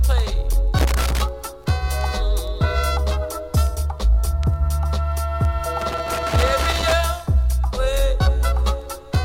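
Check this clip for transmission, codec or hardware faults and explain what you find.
A loose connector crackle breaks into the signal twice, from 0.78 to 1.22 s and again from 5.81 to 6.93 s. A worn or dirty contact in the signal path is making and losing connection as it shifts, so the audio is chopped on and off in quick, uneven succession, with pops where any DC on the line jumps at each break. The result is an irregular burst of scratchy crackle laid over the sound for each stretch, the second lasting just over a second.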